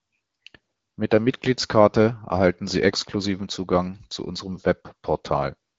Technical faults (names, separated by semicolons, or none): none